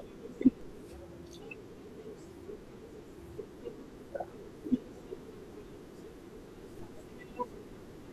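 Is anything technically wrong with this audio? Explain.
Yes. A DC step occurs at 0.61 s and again at 6.79 s: the waveform's zero line abruptly shifts by about −42 dBFS, then drifts back as a 2 Hz high-pass drains the offset. Each jump produces a brief low thump beneath unchanged speech.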